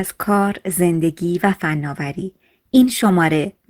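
No technical faults are audible anywhere in the recording.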